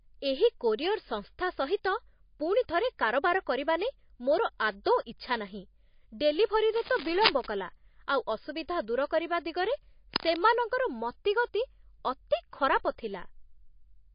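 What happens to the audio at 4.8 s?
At 4.84 s, a transform block holding a sharp attack late in its span spread its quantisation noise evenly across the whole block. That noise, sized for the loud attack, fills the quiet moment just before it. This pre-echo is a short hiss about 17 ms long, and the attack itself sounds soft and smeared.

Across this moment and the whole speech clip, the likely cause is MP3 compression at a low bitrate, one that fits roughly 29 kbps. Nothing is present above 5.1 kHz, and the codec damage is plainly audible as a watery, swirling texture with smeared attacks.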